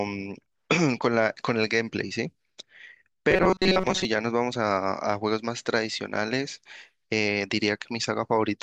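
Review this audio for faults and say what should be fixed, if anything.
From 3.31 to 4.05 s there's robotic sound from repeated short buffers: a rigid 188 Hz buzz, likely from about 5.3 ms chunks looping while most of the real audio gets skipped. A bigger jitter buffer or steadier delivery upstream should stop the player running dry.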